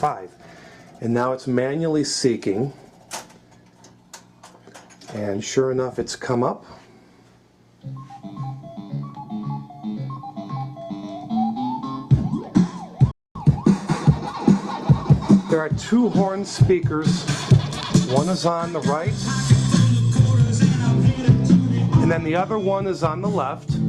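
At 13.11 s there is a playback stall. The sound cuts out mid-flow and stays silent until 13.35 s, a gap of about 240 ms. That is long enough to hear as a clear break. The likely cause is the player running short of data, or its playback thread being held up. Output stops until the player recovers.

From 13.35 s to 15.74 s comes catch-up at higher speed. The player runs through its backlog 1.1 times faster by resampling. Because resampling changes speed and pitch together, everything rises by roughly one and a half semitones. The sound is audibly quicker and sharper for these 2.4 seconds. This recovers time lost in the stall, and the faster section ends at 15.74 s.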